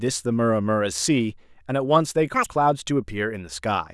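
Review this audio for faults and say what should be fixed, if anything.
From 2.34 to 2.49 s the speech jumps to double speed and an octave higher: the audio is being read two samples at a time. The reader consumes sample pairs as single frames, so high frequencies fold back. Prevent it by making the reader's channel count and sample width match the stream's actual format.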